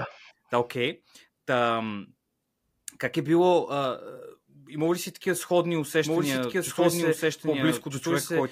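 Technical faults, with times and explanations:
6.05 s to the end, doubled audio track: after "ли си такива сходни" a second, equally loud copy of the speech runs about one and a half seconds behind, cutting in abruptly with no decay or room colour, likely from a slower second capture path.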